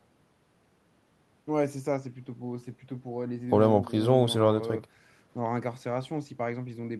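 Listening to this speech recording, nothing technically amiss stood out at any point.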